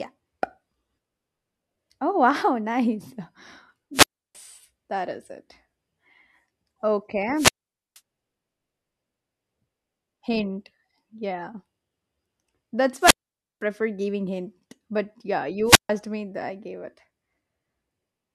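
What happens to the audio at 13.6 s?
The radio link from the wireless microphone fades out between about 13.00 s and 13.63 s, causing a wireless microphone squelch dropout. As the received FM signal weakens, hiss and static swell briefly, then the receiver's squelch mutes its output entirely, leaving a hole of near silence lasting about 0.51 s. At 13.6 s the signal recovers, the squelch reopens, and the speech comes back in at the tail of that gap.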